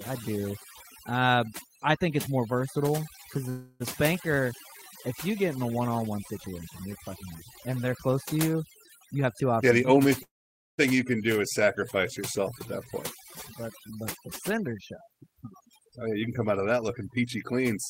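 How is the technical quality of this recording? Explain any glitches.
The recording has several clear glitches on top of a heavily processed sound throughout.

Overdone noise removal affects the whole clip. The noise reducer was set too strong, pulling down frequency bands near its noise estimate. Quiet parts of the speech vanish with them. The background sits near silence with twinkling specks.

A call audio freeze occurs twice. At 3.49 to 3.82 s, just after "it's more versatile because", the last sound is stretched into a fading buzz or hiss for about 0.31 s. At 10.23 to 10.80 s, just before "you can", a 0.55 s gap is mostly silence. The likely cause is delayed packets emptying the jitter buffer. Speech resumes where it stopped, so nothing is lost, only delayed.

A jitter buffer speed-up occurs twice. From 8.99 to 10.06 s, after "they're close to you", speech runs at 122% speed, with about a fifth of a second cut. 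From 13.93 to 17.53 s it runs at 108%, with about 0.3 s cut. The receiver trimmed tiny pitch-period slices to shrink a backlog, so the speech sounds hurried but keeps its pitch.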